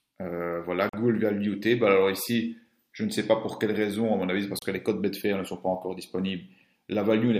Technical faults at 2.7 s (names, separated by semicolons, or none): none